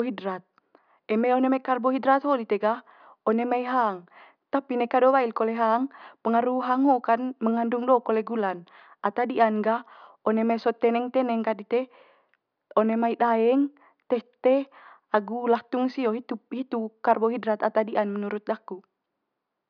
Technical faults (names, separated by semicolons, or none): none